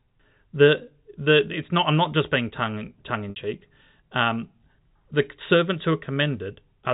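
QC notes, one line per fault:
3.30–3.36 s, packet loss with pitch repetition: about 60 ms of speech drops out, which fits two lost packets. The receiver loops the last pitch cycle and fades it, so the speech briefly holds as a buzzy tone, then cross-fades back into the G.711 telephone band.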